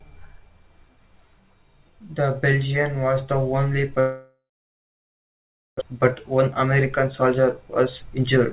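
A long network dropout from 4.00 to 5.83 s is the likely cause of the gap. When no packets arrived, the receiver stretched the last sound into a fading buzz, then went silent for about 1.4 s. Roughly a second of audio never plays, and the sound resumes after the missing part.

A jitter buffer speed-up runs from 5.93 to 8.41 s. The late packets piled up as about 0.7 s of extra delay, and the receiver clipped out tiny pitch-period slices to catch up, about 0.2 s in total. The speech plays about 9% faster at an unchanged pitch and sounds hurried.

Throughout, the narrowband call path leaves nothing above 4 kHz, which fits G.711 mu-law at 64 kbps.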